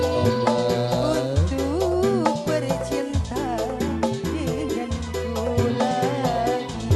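No technical faults are audible.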